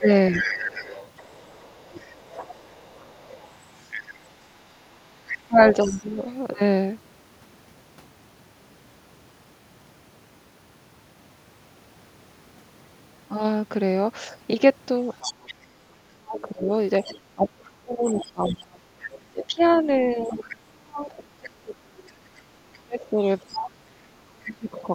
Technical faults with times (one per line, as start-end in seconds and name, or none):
0.00-0.48 speech suppressed in double talk
0.32-6.34 other side's voice leaking through
5.48-6.19 speech suppressed in double talk
15.14-20.56 other side's voice leaking through
16.10-24.95 speech suppressed in double talk
22.73-23.58 other side's voice leaking through
24.77-24.83 other side's voice leaking through